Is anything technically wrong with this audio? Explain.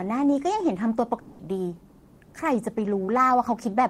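Yes. From 1.19 to 1.42 s the speech breaks off into a fading buzz. It is likely a long network dropout. The receiver stretched the last sound to cover about 200 ms that never arrived. Speech then resumes, with that part missing.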